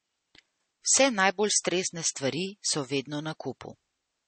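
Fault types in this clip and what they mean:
MP3 compression: the speech has a plainly watery, swirly texture and nothing above 8.3 kHz, likely from a starved MP3 encode, which fits around 32 kbps.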